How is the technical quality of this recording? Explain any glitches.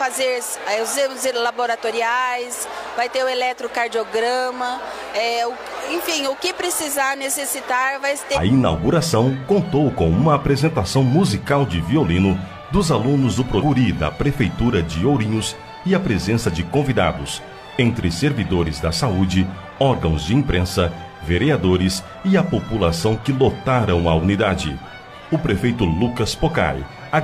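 The recording has two brief glitches caused by damaged data in a compressed stream, at 8.32–8.38 s and 13.56–13.63 s, each lasting about 70 ms. In both places corrupted bytes made the decoder misread frames and lose sync until it found the next valid frame header. Each glitch is heard as a short squawk or blip. A spectrogram would show a narrow vertical strip of disordered energy, and the waveform would show an abrupt, irregular patch there.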